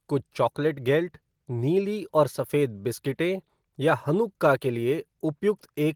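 No technical faults are audible.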